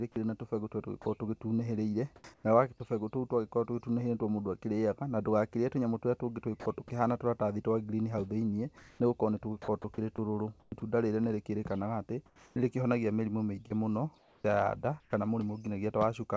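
At 1.02 to 1.06 s, a brief stretch of speech is dropped by the voice detector. About 30 ms of sound gives way to steady noise for 40 ms, likely because the detector judged the sound to be background.

From 2.16 to 2.44 s, comfort noise replaces the background for 180 ms, likely because of discontinuous transmission, so the real ambience turns into a flat, featureless hiss. Within that span, from 2.21 to 2.24 s, the next sound's onset is clipped by the voice detector. About 30 ms of its beginning is missing, likely from late detection, so it starts abruptly.

The same comfort-noise substitution recurs from 8.78 to 9.00 s, likely from the same cause. It lasts 220 ms, the background sits about 32 dB below the loudest speech, and the level changes by about 1 dB.

From 9.82 to 10.82 s, the speech is chopped by the voice detector, likely through repeated on-off switching. About 220 ms in total is filled with synthetic noise, so the sound has two or more holes.

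Comfort noise again stands in for the background from 12.26 to 12.56 s. It lasts 300 ms, sits about 33 dB below the loudest speech and is about 2 dB quieter than the real ambience, likely through the same substitution.

A second chopped stretch runs from 13.68 to 15.12 s, with about 404 ms replaced, likely by the detector toggling again.

The call path's band limit is audible as nothing above 8 kHz, which fits G.722.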